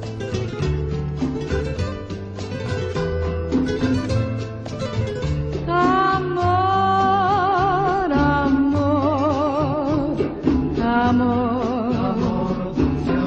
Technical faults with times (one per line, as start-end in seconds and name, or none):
none